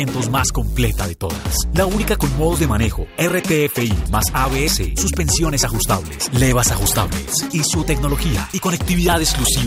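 No technical faults are audible.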